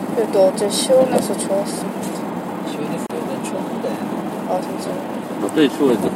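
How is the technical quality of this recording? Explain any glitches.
A brief dropout interrupts the recording once. From 3.07 to 3.10 s the sound drops out for about 31 ms, then resumes exactly where it left off. The edges are smeared by the codec. This is a gap at a join of encoded pieces. The audio was encoded in separate sections and butted together untrimmed, so the encoder's start-up delay and the padding on the previous section's final frame both remain, leaving a short hole in otherwise continuous sound.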